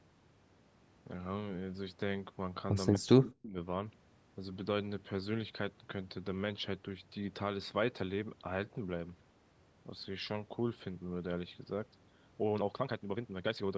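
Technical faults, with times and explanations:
2.94–2.98 s, echo leak: a brief, faint delayed copy trails the speech by 241 ms, well below the talker, likely far-end loudspeaker pickup the echo canceller missed.
2.99–3.57 s, speech suppressed in double talk: the speech dips sharply and partly drops out, likely because the echo canceller mistook it for echo while both sides overlapped.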